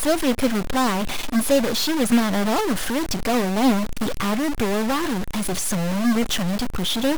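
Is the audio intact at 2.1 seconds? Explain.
No. At 2.1 seconds the speech carries a harsh, buzzy distortion, and the gaps between syllables fill with a steady noise floor, as across the whole clip. The likely cause is a stuck bit, one data bit held fixed and offsetting samples by a step of around -25 dBFS.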